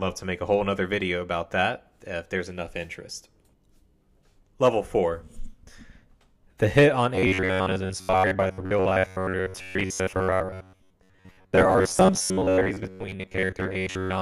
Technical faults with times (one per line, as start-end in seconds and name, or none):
7.15-14.22 robotic sound from repeated short buffers